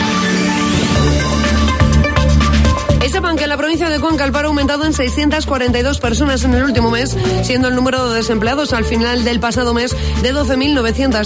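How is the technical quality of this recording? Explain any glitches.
Technically sound, with no glitches anywhere in the recording.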